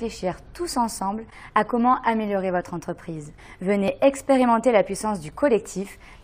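No technical faults can be heard anywhere in the audio. Nothing in it calls for a timestamp or a comment on its signal path.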